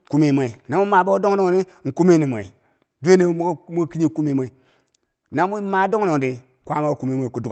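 No technical faults turn up anywhere in the speech, which arrives through a WebRTC call path with Opus coding whose top end stops near 8 kHz, as expected for that kind of link.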